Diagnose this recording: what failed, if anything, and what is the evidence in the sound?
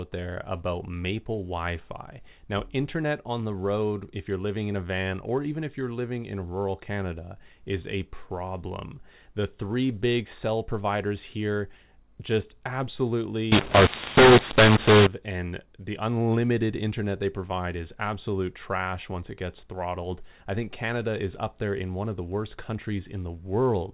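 From 13.52 to 15.07 s, ending just before "and the unlimited internet", the speech turns harsh and the pauses fill with hiss. This is a mu-law and A-law mix-up at the codec, where mu-law telephone samples are decoded as A-law. Unlike clipping, quiet samples are lifted too, not just peaks.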